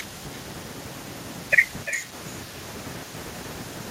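From start to finish the speech carries echo with no canceller: the far end is playing the call through a loudspeaker, its microphone picks it up, and nothing subtracts it, so each phrase returns roughly a third of a second later, about 13 dB quieter and thinner. On a spectrogram every syllable has a faint, delayed ghost trailing it; on the waveform, small offset copies of each burst fill the gaps between phrases.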